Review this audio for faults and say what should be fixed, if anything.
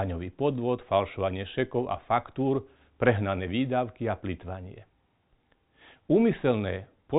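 Nothing here needs fixing; no faults can be heard.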